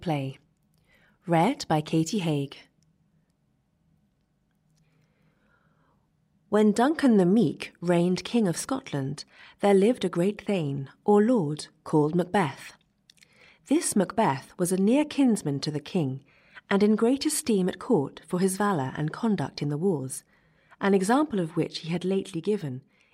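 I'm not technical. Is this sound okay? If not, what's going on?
Yes, this one sounds fine; nothing in it stood out as a problem, so there's nothing to worry about here.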